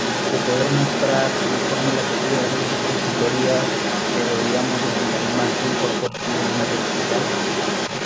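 From 0.0 to 8.05 s a second voice runs under the speech at roughly the same loudness, likely the other side's voice leaking through because the echo canceller left loudspeaker echo in the microphone. Between 6.1 and 6.14 s the talker briefly dips by a few decibels, likely speech suppressed in double talk as the canceller turned down both voices.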